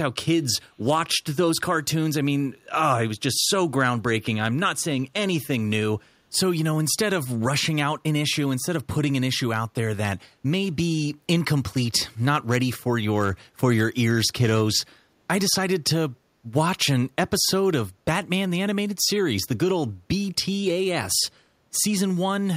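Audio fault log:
0.82–0.86 s echo leak: a brief, very faint copy of the speech arriving 334 ms late, likely loudspeaker pickup that the far end's echo canceller let through.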